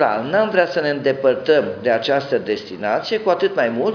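No technical faults can be heard anywhere in this clip.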